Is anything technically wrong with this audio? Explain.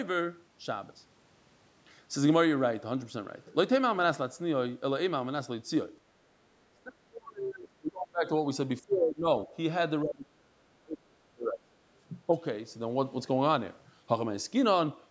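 Yes. The speech is suppressed in double talk at 6.69–8.27, 8.85–9.28, 9.46–9.50, 10.03–11.79 and 12.27–12.36 s. The level dips or breaks up, by roughly 30 dB at the worst points and far less in the brief ones. This is likely an echo canceller that, with both sides talking at once, couldn't tell the near talker from loudspeaker echo and attenuated everything. On a waveform the envelope caves in; a spectrogram shows the harmonics thinning to faint, gappy patches.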